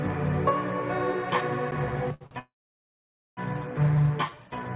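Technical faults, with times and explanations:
2.14–2.23 s and 2.27–2.33 s, short stall from a late packet: the sound is held too long twice in quick succession, for 66 ms and then 43 ms, with a faint buzzy dip each time. The jitter buffer ran empty when a packet was due, so the receiver stretched the last sound until the packet arrived and then carried on from the same point. Nothing is lost, but the timing slips later. On a spectrogram each stall is a short smear of flat horizontal streaks. In the waveform it appears as one cycle pattern repeated at slightly lower level.
2.39–3.39 s, call audio freeze: the sound freezes for about a second. The last sound continues briefly as a fading buzz, then about 0.87 s of silence follows before the audio resumes exactly where it stopped. Nothing is missing, but about a second of gap is inserted. The likely cause is packets held up in transit, which drained the jitter buffer completely. 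A spectrogram shows a brief decaying smear and then an empty column, with the content band still topped at 4 kHz, consistent with a narrowband G.711 call path. The waveform shows a short tapering tail and then a flat line.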